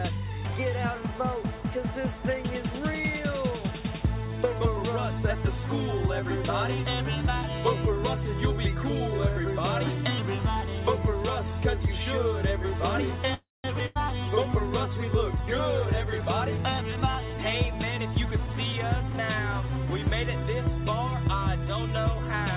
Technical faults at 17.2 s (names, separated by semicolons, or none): jitter buffer speed-up